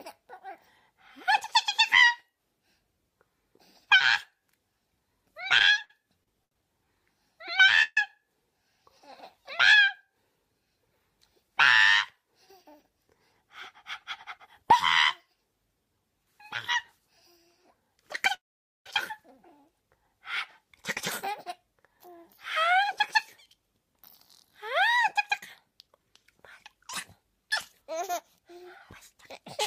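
From 5.58 to 6.56 s the sound drags and stutters through six brief holds, the longest 74 ms, filling about a fifth of the span: repeated stalls (stutter), where late packets kept emptying the jitter buffer. At 7.82 to 7.98 s a 140 ms held buzz, ending in 40 ms of silence, marks a call audio freeze, likely from packets delayed in transit. From 12.16 to 14.63 s the audio runs 5% fast at unchanged pitch, a jitter buffer speed-up trimming tiny pitch periods to cut built-up delay. It happens again at 17.73 to 18.05 s at 12%. A second freeze at 18.34 to 18.87 s holds for 512 ms, nearly all of it silent. Further speed-ups follow at 21.88 to 26.12 s (5%) and 27.81 to 29.59 s (3%).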